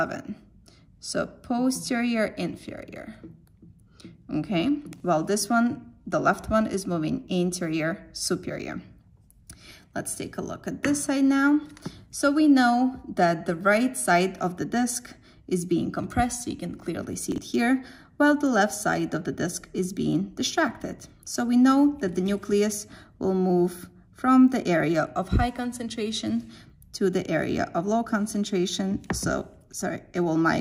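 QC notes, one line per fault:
4.96–5.00 s and 17.32–17.38 s, chunks out of order: a 20 ms block plays one chunk late, then two chunks late. Nothing is lost, but the sequence is swapped, so each spot sounds briefly jumbled, with three hard joins.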